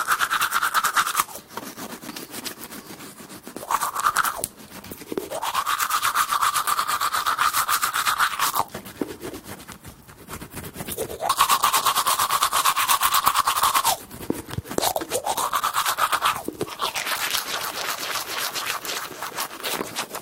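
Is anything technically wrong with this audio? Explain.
Yes. There is damaged data in the compressed stream, heard as four very short blips at about 4.14, 11.28, 13.59 and 19.39 s, each lasting roughly 12 to 16 ms. At those points the decoder meets corrupted bytes, misreads the frames and has to resynchronise on the next valid header, so it briefly outputs garbled content.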